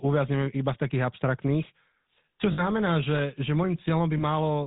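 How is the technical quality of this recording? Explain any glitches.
The quality is limited: the speech carries codec roughness throughout and two brief glitches.

GSM full-rate codec, throughout: a pulse-driven vocal-tract model, consistent with 13 kbps full rate, removes everything above 4 kHz, leaving the speech plainly buzzy and gravelly.

Lost GSM frames, at 2.52–2.63 s and 4.18–4.23 s: the decoder repeated the last good frame, so the sound briefly holds as a rough metallic ring. The first gap suggests about 60 ms of loss, the second about 20 ms.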